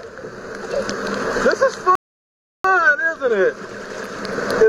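At 1.95 s the audio drops to silence and holds there until 2.64 s, a rebuffering stall. The player exhausted its downloaded buffer and halted playback while waiting for more data to arrive. When it resumes, the sound picks up at exactly the point where it broke off, so no material is skipped. The gap simply inserts about 0.69 s of dead air into the timeline, stretching the clip by that amount.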